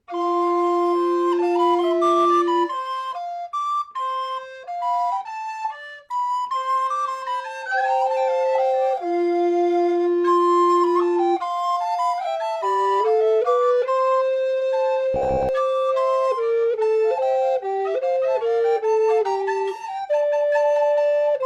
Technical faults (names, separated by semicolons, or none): AAC frame loss with concealment; robotic sound from repeated short buffers